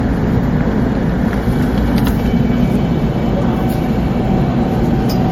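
Generation loss throughout: the sound is swirly, hollow and smeared, with blurred attacks and nothing above 16.6 kHz, likely from about four passes through MP3 near 64 kbit/s.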